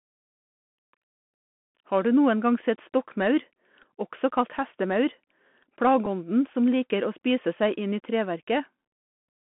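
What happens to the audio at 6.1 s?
Right around 6.06 s there's a Bluetooth headset packet repeat: the headset link dropped about 7.5 ms of audio, which fits a couple of lost packets, and the chip simply replayed the previous packet's bits. It's far too short to build into a steady buzz, so you just hear a tiny tick.

Underneath that, the whole stretch still carries the Bluetooth CVSD headset codec. Its one-bit up/down coding, which fits a 64 kbps link, squeezes everything into roughly 200 Hz to 3.4 kHz. It clearly adds a grainy hiss and roughens sibilants and loud bright moments.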